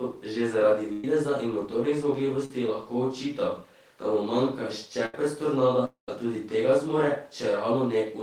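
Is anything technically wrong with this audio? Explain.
Yes. The speech has three kinds of network gap faults.

Burst of packet loss at 0.92–1.04 s (after "že zaradi", before "in motornih") and 5.06–5.14 s: about 110 ms and 70 ms are gone. The receiver extends and fades the last sound into a held buzz or a fading hiss, which shows as smeared, decaying energy on a spectrogram.

Short concealed packet loss at 2.45–2.51 s, before "lahko očital da mu": about 50 ms is patched by continuing the prior sound, giving a brief wobble and a blurred patch in the spectrogram.

Long network dropout at 5.85–6.09 s, before "tudi tega zmore", likely a stall in delivery: about 230 ms is lost. A fading buzz or hiss gives way to about 120 ms of flat silence in the waveform.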